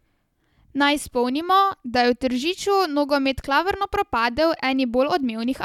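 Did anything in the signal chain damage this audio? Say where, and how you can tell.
No, no stage of the signal chain has left audible damage on this speech recording. At no point in it does the capture, processing, transmission or playback path give itself away.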